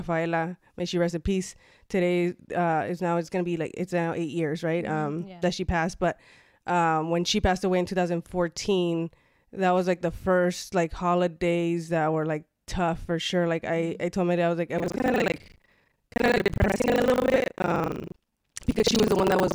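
From 14.76 s to the end of the clip, the speech picks up buffer tearing: a rough, robotic rattle at 25 Hz that sounds only while speech is present. The writer and reader of the playback ring buffer have drifted so they cross within each 40 ms period, leaving roughly half of every buffer filled with audio from around 70 ms earlier. The waveform shows hard steps every 40 ms, and a spectrogram shows evenly spaced vertical broadband stripes over the speech.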